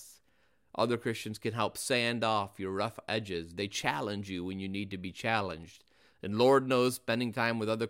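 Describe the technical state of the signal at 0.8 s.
At 0.8 s the speech signal is intact, with no audible fault at that moment.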